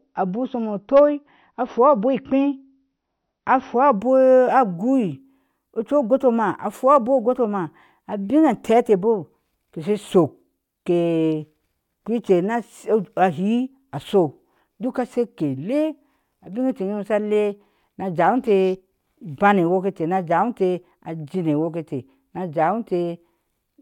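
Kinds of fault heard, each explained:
Adaptive stream starting at a low bitrate: for the first 4.0 s the speech is dull, with nothing above about 6 kHz and stronger codec artefacts, then it brightens abruptly without a gap, consistent with a player opening on a roughly 48 kbit/s MP3 rendition before stepping up to about 128 kbit/s.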